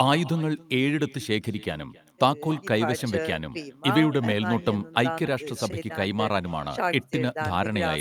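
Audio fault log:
Throughout: echo with no canceller. Every phrase of the speech is trailed by a faint second copy arriving roughly a third of a second later, about 22 dB below the direct sound. The far end is playing the call over a loudspeaker, its microphone is picking that playback up, and no echo canceller is removing it before it is sent back. The returned copy has passed through a speaker and a room, so it sounds thinner than the original.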